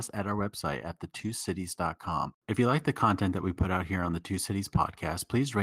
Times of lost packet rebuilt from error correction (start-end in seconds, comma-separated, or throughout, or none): 1.19-1.29, 2.05-2.11